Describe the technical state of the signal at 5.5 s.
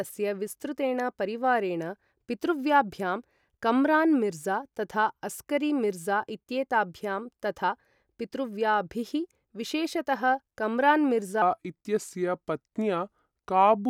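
At 5.5 s the speech signal is intact, with no dropout, distortion, glitch or other fault audible at that point.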